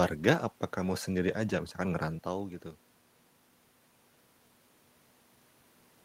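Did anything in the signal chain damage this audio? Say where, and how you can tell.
No, nothing in the signal chain has damaged this speech recording. The steady room noise belongs to the recording space, and the change in level at about 2.0 s is the talker moving relative to the microphone, not a problem in the chain.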